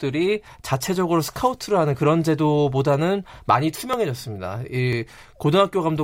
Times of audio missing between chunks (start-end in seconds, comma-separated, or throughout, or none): 2.94, 3.93, 4.93